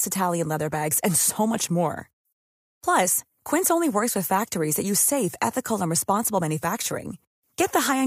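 Nothing in the recording stood out as a technical fault on listening.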